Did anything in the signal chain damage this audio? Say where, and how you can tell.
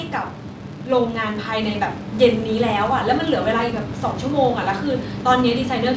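Yes. A filter in the processing chain restarts on every block. Throughout the speech, a buzz near 172 Hz rises and falls with the level, which fits a 256-sample block. Mains hum would stay steady. Here each block opens with a small transient when the filter's state is reset.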